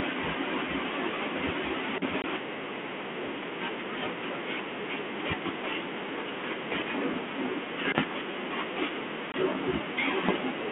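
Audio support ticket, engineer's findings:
Packet loss on the ADPCM call at 2.22–2.24 s and 9.32–9.34 s: 20 ms hard-edged silent gaps, about one packet each. After each gap the decoder's predictor and step size drift out of sync, so speech comes back slightly distorted before settling over the 32 kbit/s G.726 link.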